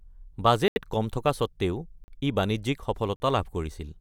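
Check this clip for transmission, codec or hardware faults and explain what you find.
Three blocks of digital silence interrupt the speech, at 0.68 to 0.76 s (80 ms), 2.04 to 2.08 s and 3.16 to 3.20 s (40 ms each). The output buffer likely went unfilled, so the sound cut out with no fade, leaving short holes.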